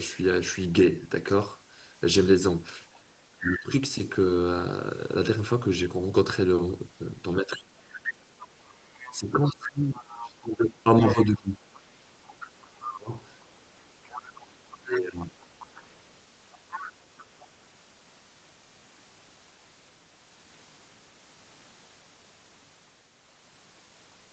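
Speech suppressed in double talk at 3.4 to 3.73 s, 7.41 to 8.2 s, 9.19 to 11.63 s, 12.83 to 13.16 s and 14.81 to 15.35 s: the speech dips by roughly 20 to 30 dB, most deeply around 7.4 to 8.2 s, and the longest stretch runs about two seconds. This is likely the echo canceller turning down both the talker and the echo while both sides spoke at once.

Other side's voice leaking through from 7.93 to 17.46 s: a second voice sits faintly under the speech, about 15 dB lower, likely loudspeaker playback that the echo canceller did not fully remove from the microphone.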